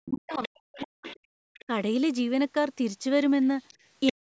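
From the start to about 1.06 s the talker's speech is pushed down hard, by something like 40 dB at its deepest, for most of that second. This is speech suppressed in double talk, likely caused by the echo canceller meeting both voices at once and turning everything down rather than separating them. Unlike a plain level dip, the loss comes and goes with the other voice's activity.

That other voice is audible from 0.31 to 1.65 s: the other side's voice leaking through, some 20 dB below the talker. The echo canceller likely left a residue of the loudspeaker signal in the microphone. It is a second voice layered underneath, not a drop in the main one, which is what separates it from the suppression.

At 1.34 to 1.39 s the room sound itself vanishes for about 50 ms, down by about 35 dB. This is background gated by the echo canceller, which clamped the microphone while the loudspeaker was active. 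The difference from double-talk suppression is that the ambience, not the talker, blinks out, then snaps back.

A brief, shallower suppression follows at 1.67 to 1.71 s, around 10 dB. The leakage returns from 3.68 to 4.12 s, now about 15 dB under the speech. From 4.11 s to the end, a final suppression of roughly 40 dB cuts the talker again. Throughout, the band stops at 8 kHz, as the call's microphone processing shapes it.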